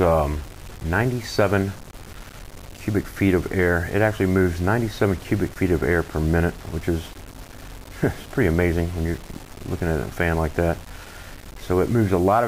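Grainy distortion runs through the whole clip and tracks the sound itself, roughening quiet passages. The likely cause is low bit depth without dither, about 6 bits rounded, leaving error roughly 20 dB below the signal. A waveform would show visible stair-steps, and a spectrogram would show hash that comes and goes with the signal.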